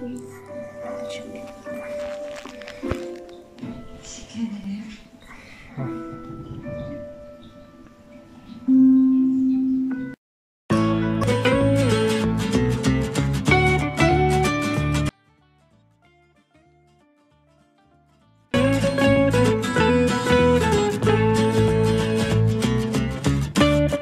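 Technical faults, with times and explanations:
15.09 to 18.54 s: audio dropout to a faint residue. The sound cuts off abruptly for 3.45 s. Only a faint leak remains, roughly 40 dB below normal. It returns just as suddenly. The likely cause is a lost signal while the path stayed live.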